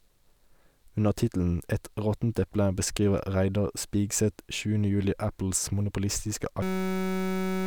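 At 6.62 s the speech gives way to a system hang loop: a 5.33 ms segment, which fits a 256-sample buffer, repeats at 188 Hz until 7.66 s, producing a steady buzz.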